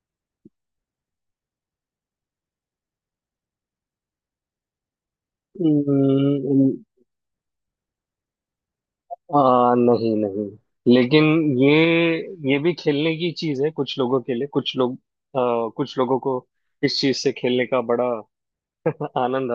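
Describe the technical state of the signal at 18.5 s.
At 18.5 s the signal is intact, with no audible fault at that moment.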